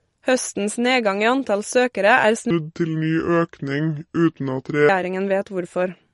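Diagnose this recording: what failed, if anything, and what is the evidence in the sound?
Codec stage: the whole clip sounds watery and swirly. That points to heavy MP3 compression, likely at a low bitrate of around 48 kbps. Starved of bits, the encoder chops the treble and drops weak frequency lines from frame to frame.

Playback or editing stage: from 2.51 to 4.89 s the speech falls into a section at the wrong speed. It runs at 0.725 times normal, so it comes out slow and about five semitones deeper. Speed and pitch move together, likely because that stretch was played against the wrong clock.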